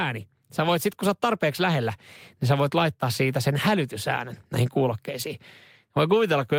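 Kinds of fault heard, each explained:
Nothing stood out on listening to this speech recording.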